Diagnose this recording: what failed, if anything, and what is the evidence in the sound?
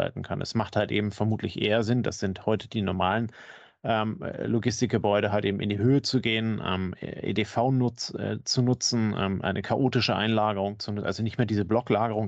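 Nothing in the speech stood out as a fault on careful listening, so no failed stage can be identified from the sound.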